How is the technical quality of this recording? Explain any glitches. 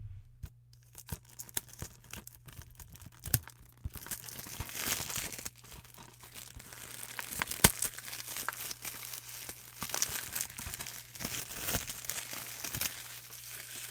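The technical quality is sound, with no glitches to explain. Nothing in the recording of these sounds breaks up, drops out or jumps.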